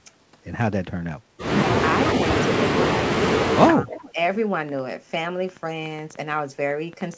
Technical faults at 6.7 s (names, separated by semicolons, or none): train of clicks